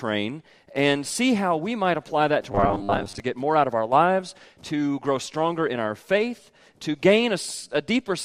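From 2.52 to 3.20 s, robotic sound likely from repeated 10 ms buffers: a fixed 100 Hz buzz, not the silent gaps of dropouts.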